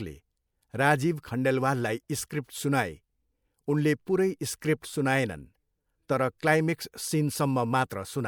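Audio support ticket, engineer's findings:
Short hiss smearing into a softened attack at 2.29 s, just after "राजीव खण्डेलवाललाई". Pre-echo, about 12 ms. Transform codec: attack sits late in its block, so quantisation noise sized for the loud onset also fills the quiet lead-in.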